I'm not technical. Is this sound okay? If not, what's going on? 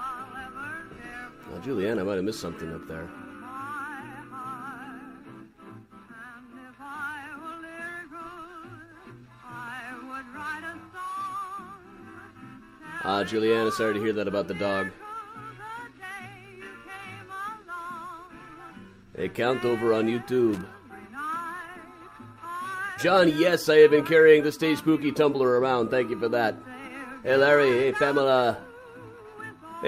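No. At about 20.53 to 20.61 seconds there is a short burst of loose connector crackle. A worn or dirty plug or socket briefly loses and regains contact. That chops the sound on and off very fast, so you hear a quick scratchy crackle.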